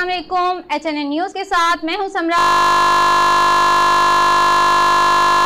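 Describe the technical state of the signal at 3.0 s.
At 3.0 s the signal is stuck in a system hang loop that runs from 2.39 s to the end. A frozen system left the hardware replaying one 20 ms buffer, producing a steady 50 Hz buzz. A waveform shows identical repeating cycles, and a spectrogram shows flat harmonic lines at 50 Hz multiples.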